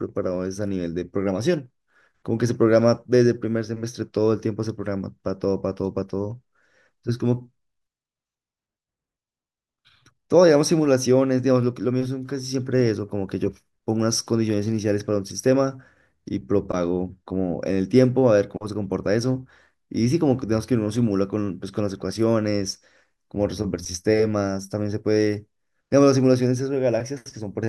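A speech recording with nothing technically wrong with it.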